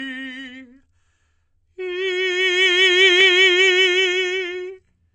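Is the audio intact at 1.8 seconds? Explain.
No. At 1.8 seconds, as across the whole clip, the music sounds dull and smeared: there is nothing above 8.5 kHz, and the top end has the watery, swirling texture of heavy data reduction. This is likely low-bitrate audio saved at a high bitrate, which fits a first pass through a low-rate codec around 32 kbit/s before re-encoding as a large MP3. The second encode could not restore the detail the first one discarded.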